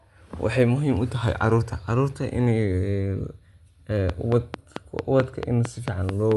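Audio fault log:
Throughout: Bluetooth LC3 compression. The speech has a breathy, grainy edge and nothing above about 11.5 kHz. It sounds like a transform codec running at a modest rate, which fits LC3 at around 48 kbps with 10 ms frames. The upper spectrum has been thinned out and partly filled with noise, so sibilants and consonant detail come across fizzy rather than crisp. The damage is plainly audible, and a Bluetooth LE Audio link is the likely culprit.
4.10 to 6.33 s: train of clicks. A steady ticking sits on top of the speech, about 4.5 clicks per second at even spacing, roughly ten in all. They're loud, peaking around 20 dB above the speech, and they keep going through the gaps between phrases. Each click has much the same shape, and that regular pace likely points to periodic interference or an interface hiccuping on a fixed cycle.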